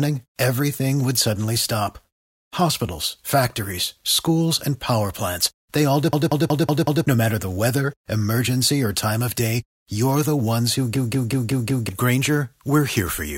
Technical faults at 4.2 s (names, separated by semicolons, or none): none